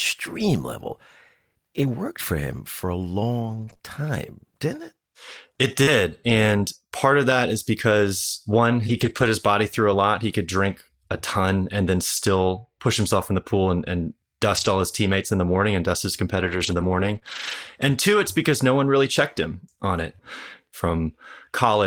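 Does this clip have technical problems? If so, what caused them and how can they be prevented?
Yes. Scattered short gaps occur from 1.83 to 5.89 s: about four brief holes, the longest around 40 ms, each patched by continuing the last sound, leaving small ticks or smears.

Lost packets rebuilt from error correction occur at 8.89–9.27 s, 12.17 s, 14.57–14.67 s, 16.35–17.17 s and 17.23–17.53 s. The decoder played low-bitrate copies carried in the following packets, so those stretches sound rougher and noisier rather than silent.

Short concealed packet loss occurs at 17.19–17.23 s, where about 20 ms never arrived in time. The receiver extended the preceding sound across the hole and blended back, producing a brief smear.

A steadier network path with less congestion, a wired connection rather than Wi-Fi, and a deeper jitter buffer would prevent these losses.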